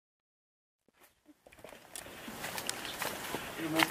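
Truncation distortion on the fade-in, 0.0 to 2.4 s: an undithered stage fitting 11 bits turns the quiet start gritty until 1.9 s.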